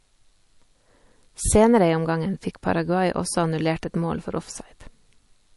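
Throughout the speech, likely MP3 compression starved of bits, consistent with a low bitrate around 48 kbps, cuts the treble at a fixed 11.3 kHz and drops weak frequency content. Nothing is heard above that point, and plainly audible codec damage remains across the whole clip.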